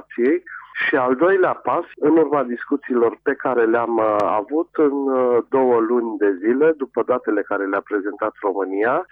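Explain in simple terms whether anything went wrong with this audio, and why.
One thing goes wrong: a single loud pop at 4.20 to 4.22 seconds, lasting only about two hundredths of a second and standing out a bit above the surrounding level. It's most likely a quick electrical jolt, say from a switch, a plug being nudged or a bit of static, that got added to the signal. You hear it as a sharp click-thump sitting on top, while the audio underneath carries straight on without a break.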